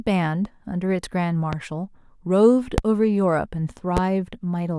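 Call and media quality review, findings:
Loud pop, three single events at 1.53–1.56 s, 2.78–2.81 s and 3.97–4.00 s. Each is a sharp pop, roughly 10 to 20 dB above the speech, which continues underneath. Likely a voltage step from a switch, plug, static or driver glitch.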